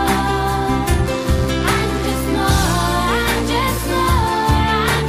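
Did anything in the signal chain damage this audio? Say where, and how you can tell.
Yes, there's a mains buzz in the analogue wiring from 1.02 s to 4.51 s, a raspy 50 Hz buzz sitting roughly 25 dB under the sound. Switching spikes twice per mains cycle are leaking in through poor shielding or a dimmer, stacking harmonics up into the kilohertz range.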